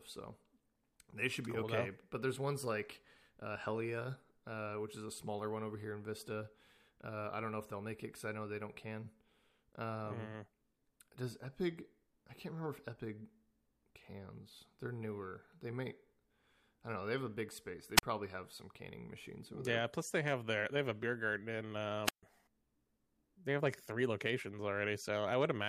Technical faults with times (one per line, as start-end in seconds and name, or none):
17.96-18.03 wireless microphone squelch dropout
22.04-22.23 wireless microphone squelch dropout